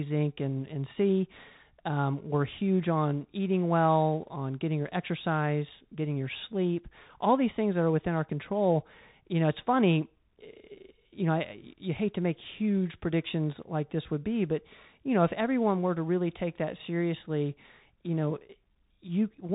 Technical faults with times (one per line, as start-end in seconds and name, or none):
0.00-19.55 Bluetooth CVSD headset codec